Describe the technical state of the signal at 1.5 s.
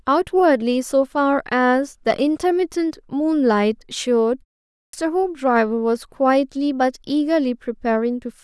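At 1.5 s the speech signal is intact, with no dropout, distortion or other fault at that moment.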